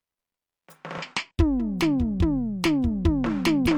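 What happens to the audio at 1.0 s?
Between 0.98 and 1.03 s the music is interrupted by a brief glitch lasting about 50 ms, heard as a chirp, squawk, click or short hole, the signature of damaged data in a compressed stream. A short stretch of the encoded bitstream is corrupt, so the decoder misreads or refuses the affected frames, loses frame sync, and searches for the next valid frame header. Once a clean header is found, normal decoding of the music resumes.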